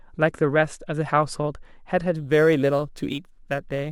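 From 2.16 s to the end at 3.91 s, the speech picks up a gritty, inharmonic fizz riding on loud and bright sounds, roughly 30 dB below the voice. It is crude rate conversion: samples repeated by nearest-neighbour picking with no filter, which fits a 44.1 kHz to 48 kHz change.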